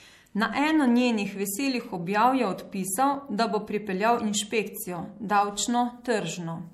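MP3 compression across the whole speech clip: the treble stops dead at 16.4 kHz, and starved weak frequency lines flicker, giving a watery swirl, likely from a low bitrate near 64 kbps.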